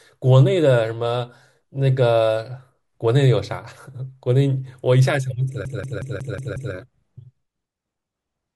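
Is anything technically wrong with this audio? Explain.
Yes. A CD stuck on one turn runs from 5.65 to 6.74 s of this speech: a scratch knocks the laser back one track each revolution, so the same 0.18 s slice of audio repeats six times, each jump marked by a brief mute, giving a fast, even stutter.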